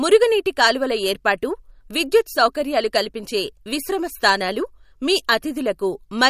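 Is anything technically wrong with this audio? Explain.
Yes. Throughout the clip the speech carries plainly audible MP3 compression artefacts, likely from a low-bitrate encode consistent with about 48 kbps. Starved of bits, the encoder cut everything above 15.3 kHz and dropped weak frequency lines frame to frame, leaving a watery, swirling texture and smeared consonant attacks.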